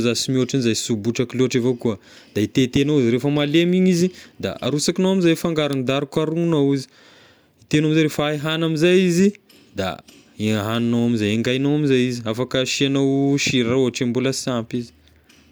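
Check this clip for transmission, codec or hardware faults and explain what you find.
Listening through the speech, nothing stood out as a transmission, codec or hardware problem.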